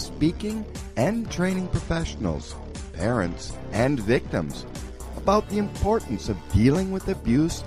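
From 1.58 s to 3.58 s, the adaptive stream drops to a lower bitrate for two seconds. The connection likely slowed. Nothing above 11.2 kHz survives, and codec artefacts thicken. The switch is abrupt, with no gap, which fits a step from 128 to 48 kbit/s MP3.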